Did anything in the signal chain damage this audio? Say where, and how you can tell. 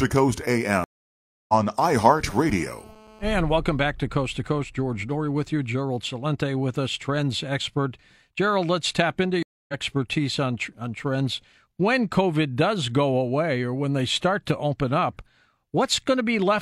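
Yes. Stream reconnect at 0.84–1.54 s and 9.43–9.74 s, after "let's tap into": network dropouts of 0.65 s and 0.26 s, then a fresh decoder resumes the speech slightly later.

GSM phone buzz at 2.43–3.32 s: a steady, raspy 217 Hz buzz about 26 dB below the speech, from a nearby phone's call bursts rectified in the analogue wiring.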